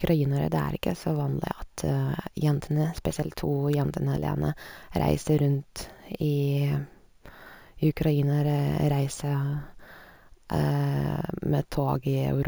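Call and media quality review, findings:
Bright metallic fizz riding on the speech throughout, rising and falling with its level; mirrored band at 8 to 16 kHz, about 26 dB below signal. Imaging from sample-and-hold upsampling: samples repeated without a smoothing filter, consistent with 16 kHz audio raised to 48 kHz.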